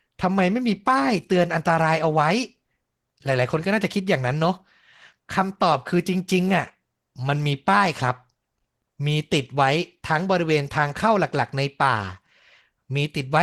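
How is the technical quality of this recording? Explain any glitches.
The recording has one fault that runs through the whole speech clip. Opus voice compression, present from start to finish: the lower band is coded by a linear-prediction speech model and the top band by a coarser transform layer. The sound points to a bitrate around 16 kbps with 20 ms frames. At that rate the excitation is coded coarsely, so the damage is plainly audible: the voice sounds hoarse and slightly synthetic, and its upper band lacks fine detail.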